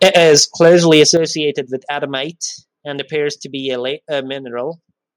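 From 0.02 to 1.11 s the speech peaks are flattened at the converter ceiling, with the input about 6 dB too hot and a small share of samples cut off, giving a harsh crackle on the loudest syllables. This is microphone overload, likely from an input level set too high. At 0.18 s the voice and background drop suddenly by about 3 dB, and at 1.17 s they drop again by about 8 dB. These microphone volume stepped-down events are likely the call software cutting the device's input gain in reaction to the clipping.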